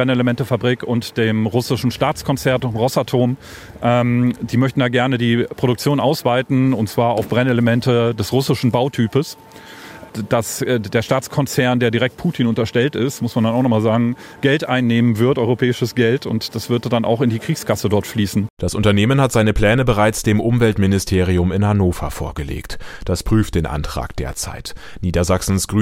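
No technical faults can be heard at any point in the signal.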